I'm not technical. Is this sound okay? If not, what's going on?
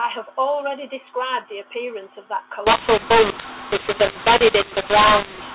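No. From about 2.67 s to the end, this speech has a mu-law and A-law mix-up: telephone audio packed one way is unpacked the other way. Loudness levels get scrambled, so the sound turns harsh and distorted, and pauses fill with hiss.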